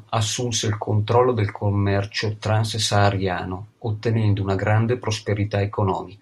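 No technical faults turn up anywhere in the speech, so there is nothing to place in time order.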